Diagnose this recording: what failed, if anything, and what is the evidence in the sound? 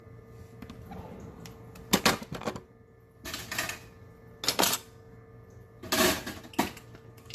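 Codec stage: throughout, the sound is swirly, smeared and hollow, with blurred attacks and nothing above 14 kHz. This is likely generation loss, consistent with around four AAC-LC passes near 64 kbit/s, each requantising on a shifted frame grid. One encode would sound cleaner.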